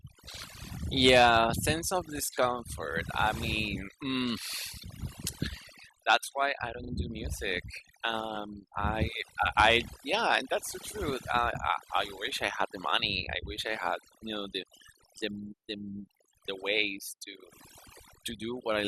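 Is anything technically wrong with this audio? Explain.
Yes, there are two problems. The first is overdone noise removal, running through the whole clip. The noise reduction was pushed too hard, so individual frequency bands get pulled right down whenever they sit near the noise estimate. The background drops and breaks into twinkly specks, and quieter parts of the speech vanish along with it.

The second is repeated frames, from 6.83 to 6.91 s. A short stretch of compressed audio got written or sent again, so the same slice plays twice more in a row. You hear a quick stutter there, which fits a 40 ms chunk repeated, and it adds 80 ms to the clip.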